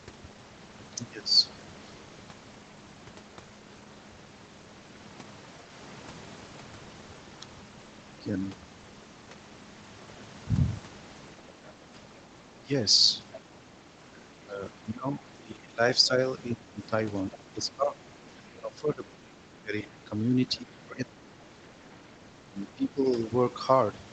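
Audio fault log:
12.53–23.06 s, speech suppressed in double talk: in about five seconds of this span the speech dips, by up to about 20 dB, and thins or breaks apart. Likely cause: with both sides talking, the echo canceller couldn't separate near talker from loudspeaker echo and attenuated both.
13.35–13.4 s, 17.16–17.38 s and 18.37–19.87 s, other side's voice leaking through: a faint second voice surfaces in two brief scraps, then a longer stretch, at about 20, 25 and 30 dB below the speech. It is likely far-end loudspeaker sound the echo canceller left in the microphone signal.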